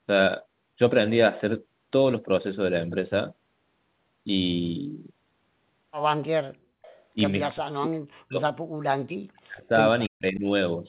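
At 6.82 to 7.03 s there's a faint delayed copy of the speech, trailing the original by about 301 ms and sitting well below it. It's likely an echo leak: the far end is on a loudspeaker and its echo canceller let some of that playback through its microphone and back down the line. A second, even quieter scrap of the same echo turns up at 9.37 to 9.41 s, again about 301 ms late.

Then the speech gets swallowed in chunks: 7.51 to 8.39 s, 8.61 to 9.7 s, and 10.09 to 10.45 s. In each stretch the level plunges nearly to silence rather than just dipping. That's speech suppressed in double talk, likely because both sides were talking at once and the echo canceller couldn't tell this talker from loudspeaker echo, so it clamped down on everything. All of this sits inside the narrow telephone band, with nothing above 4 kHz, which fits a G.711 call path.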